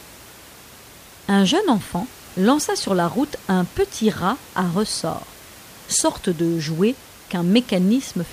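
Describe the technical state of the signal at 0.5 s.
At 0.5 s the speech signal is intact, with only the room's own background noise sitting about 23 dB below it.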